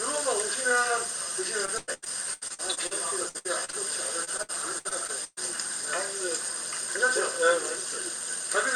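A recording of everyday sounds turns choppy and robotic, with small pieces dropping out, from 1.65 to 2.93 s, 3.29 to 3.74 s and 4.24 to 5.39 s. This is repeated packet loss (robotic sound). Packets went missing in quick succession, and each hole, the longest about 0.1 s, was patched by extending the previous sound, so roughly a third of each stretch is synthetic fill. The call path's codec limits the top end to around 12 kHz.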